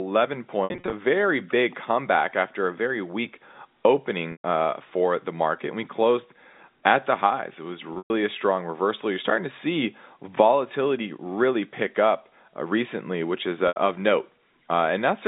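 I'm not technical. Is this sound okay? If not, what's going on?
No. The speech briefly stutters into a buzzy, held tone or fades to silence at 0.64–0.92 s (before "very big comeback after"), 4.32–4.44 s (before "uh for the market"), 7.94–8.10 s (before "a strong reversal") and 13.68–13.76 s. This is packet loss with pitch repetition: bits of the call went missing, and the phone filled each gap of up to about 0.12 s by repeating the last sliver of voice.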